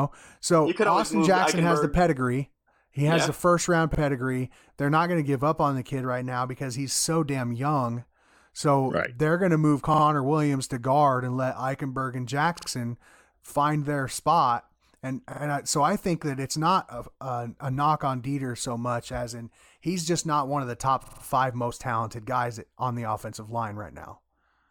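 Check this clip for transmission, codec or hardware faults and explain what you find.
Repeated buffer stutters at 3.95 s, 9.94 s (after "they're going to move"), 12.59 s, 15.33 s and 21.04 s. Each time the same 46 ms chunk, which fits a 2048-sample buffer, replays once to four times with hard joins because fresh audio arrived late.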